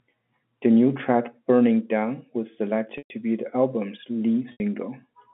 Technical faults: packet loss with pitch repetition

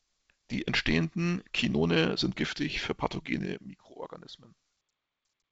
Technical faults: zipper noise

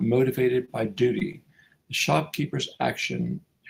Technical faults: short stall from a late packet; short concealed packet loss

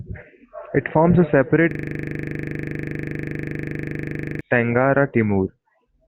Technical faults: system hang loop

